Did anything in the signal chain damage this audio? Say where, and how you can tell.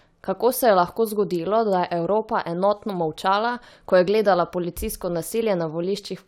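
No, nothing in the signal chain has damaged this speech recording. No stage of the path leaves any audible trace at any point in the clip.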